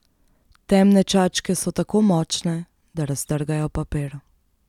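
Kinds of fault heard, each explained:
No technical fault can be heard anywhere in this speech clip.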